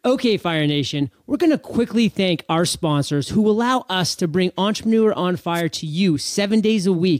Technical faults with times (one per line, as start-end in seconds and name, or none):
5.54-5.62 wireless microphone noise hit